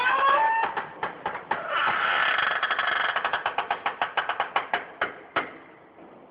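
The clip is a recording of sounds, and nothing is technically wrong with it.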